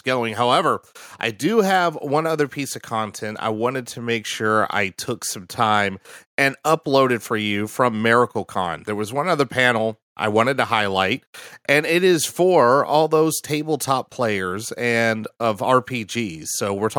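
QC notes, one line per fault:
2.04–4.35 s, automatic gain rising: after "I do have", voice and background swell together by about 4 dB until "I took some time", as automatic gain control lifts its gain on input it judged too quiet.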